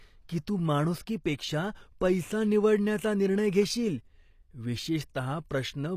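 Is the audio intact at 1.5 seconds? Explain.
No. At 1.5 seconds the speech carries the same plainly audible codec damage heard across the whole clip, likely HE-AAC compression at a rate that fits about 24 kbps. Only the lower spectrum is coded directly, and the treble is rebuilt by copying lower bands upward under a coarse envelope. The top end therefore sounds synthetic, with harmonics that fail to line up across the crossover, and nothing is present above 14.9 kHz.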